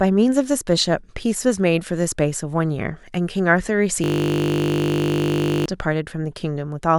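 From 4.04 s to 5.66 s the speech gives way to a steady, flat buzz at 50 Hz, a single 20 ms fragment repeating about eighty times with no variation. This is a system hang loop. The computer or its audio driver stopped supplying new samples, so the sound hardware kept replaying whatever sat in its ring buffer. A loop this short fuses into a tone rather than a stutter, which fits a buffer of roughly 20 ms.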